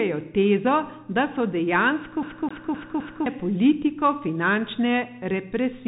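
From the start, the whole clip carries the sound of a Bluetooth CVSD headset codec. Nothing passes above about 3.8 kHz, so the speech sounds boxed-in and telephone-like. The one-bit delta encoding follows the waveform only in adaptive steps, which fits a 64 kbps CVSD link. The codec damage is plainly audible: a granular hiss sits under the speech, sibilants come out scratchy, and louder high-frequency bursts distort as the step size fails to keep up.

From 2.23 s to 3.26 s the audio behaves like a CD stuck on one turn. A segment about 0.26 s long plays four times in succession, each restart preceded by a brief mute where the jump back occurs. The result is the quick, evenly spaced stutter typical of a laser repeatedly thrown back one track at the same point on each rotation, before playback moves on.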